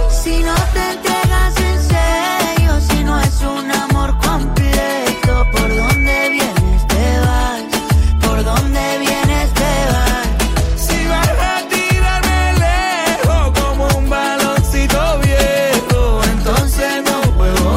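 From 4.95 to 6.42 s there is loudspeaker feedback squeal: a microphone picked up the loudspeaker it was feeding, and the loop gain exceeded one at 2.3 kHz. That tone swells over about a second into a piercing squeal roughly as loud as the sound itself.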